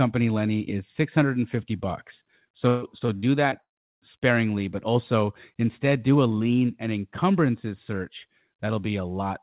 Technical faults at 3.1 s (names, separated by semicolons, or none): repeated packet loss (robotic sound)